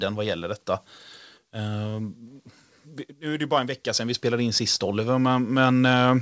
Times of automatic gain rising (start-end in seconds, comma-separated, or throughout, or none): 3.19-6.22